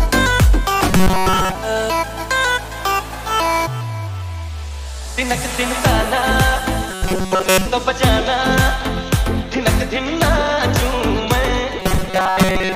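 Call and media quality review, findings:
Robotic sound from repeated short buffers at 0.89–1.55 s, 6.91–7.66 s and 11.80–12.76 s. Rigid metallic buzz fixed at 188 Hz, still tracking the sound's rough shape. Likely cause: receive buffer starved, playout looping the last ~5.3 ms chunk while most of the real audio is dropped. Spectrogram shows a flat harmonic comb at 188 Hz multiples; waveform shows identical cycles repeating every ~5.3 ms.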